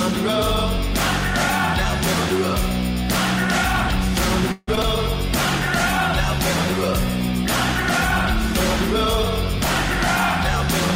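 At 4.52 s the audio stalls for about 157 ms, until 4.69 s. What's already playing gets stretched into a buzzy or hissy tail that fades, with the last 10 ms or so going silent before the sound picks up exactly where it left off. That's a call audio freeze, likely packets held up in transit so the jitter buffer ran dry. Nothing is lost, but the stream is now running about 157 ms later than before.

Right after that, at 4.75 to 4.79 s, there's a skip ahead. Playback jumps forward with only about 11 ms of fill, and something like 70 ms of audio is simply gone. The material on either side is butted almost straight together. That fits late packets being dropped, or the jitter buffer throwing some away to catch up, which pulls the delay back by roughly 50 ms.

Then at 4.83 to 4.85 s comes a short concealed packet loss. About 20 ms never reached the decoder in time, and the receiver papered over it with about 9 ms of synthesized continuation before blending back into the real audio. 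You hear it as a brief smear or wobble, and any very short sound in that spot can go missing.

From 5.07 s to 10.81 s there's a call bitrate drop. The bandwidth estimate fell and the encoder was pushed from 96 kbps down to 21 kbps, sitting at that bottom rate for about 4.18 s. At that rate Opus codes everything more coarsely, so the sound loses detail and turns rough, watery or muffled compared with the first half. The rate comes back up at 10.81 s, just before the clip finishes.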